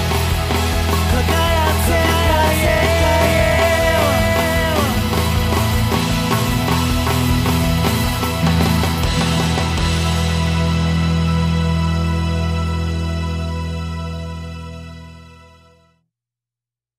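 From the very start and all the way through, there's a doubled audio track: a second full-band copy trails the original by roughly 0.7 seconds at about the same level, with no decay or room colour. Most likely a second capture path or an out-of-step edit.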